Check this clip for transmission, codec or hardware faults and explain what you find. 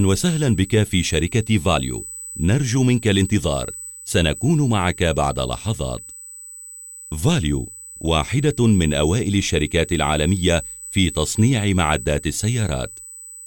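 One hardware fault is present: USB whine, running through the whole clip. It is a steady, fixed-pitch tone at 8 kHz, sitting roughly 20 dB below the sound. The 8 kHz pitch matches the bus's 125-microsecond microframes. Their current draw leaks into the audio through power or ground.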